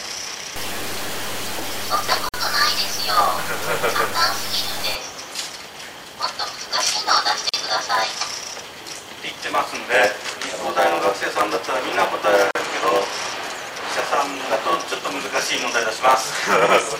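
A steady 100 Hz buzz runs through the whole clip, and the audio plays about 8% slow at normal pitch. This is a block size mismatch (padded): short blocks are zero-filled to a longer read size, opening a tiny gap in every block.

From 0.56 to 4.95 s the sound turns coarse and grainy, with distortion that tracks the signal and sits about 10 dB below it. The likely cause is low bit depth without dither, around 5 bits, truncated rather than rounded.

At 2.29, 7.49 and 12.51 s the sound drops out briefly for about 46, 40 and 39 ms, then resumes where it stopped. Each is a gap at a join of encoded pieces, where encoder delay and final-frame padding were left in.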